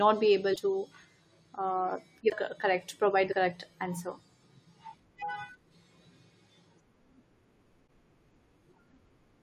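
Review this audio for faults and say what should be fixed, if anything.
Compressed frames skipped at 0.52–0.58, 2.26–2.33, 3.31–3.34, 5.21 and 7.86–7.88 s: missing or rejected frames drop out, so the speech jumps ahead roughly 50 to 150 ms.

To prevent this, re-export from the original source and check the file's integrity after transfer so that no damaged frames reach the decoder.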